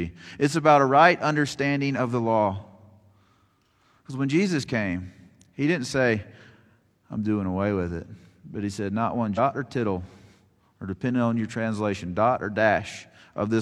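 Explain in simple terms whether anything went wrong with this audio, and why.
Damaged data in a compressed stream shows up twice in this speech, at 6.46 to 6.51 s, right after "came he didn't say", and at 9.34 to 9.39 s, just before "or tittle". Each is a brief glitch lasting about a twentieth of a second. Part of the compressed file was corrupted there, so the decoder misread those frames, lost its place, and had to hunt for the next clean starting point before the sound resumed.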